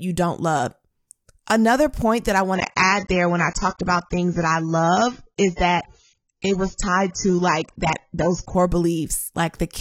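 From 2.55 s, just after "point that I", an adaptive stream at a lower bitrate takes over until 8.55 s. The speech suddenly loses everything above 7.9 kHz, and codec artefacts rise. On a spectrogram this shows as a sharp flat ceiling with no gap in the waveform.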